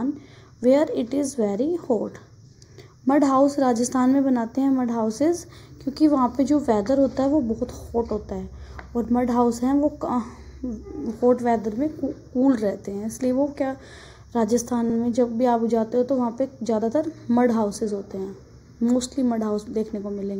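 From start to finish the sound is hollow and phasey, with a dulled, scooped quality in the upper mids that never moves. This is channel delay (comb filtering). One channel trails the other by a fraction of a millisecond, roughly a few samples, and when the two are summed to mono, the shared content cancels at evenly spaced frequencies. The first deep notch falls around 3 kHz, with further fixed notches spaced regularly above it.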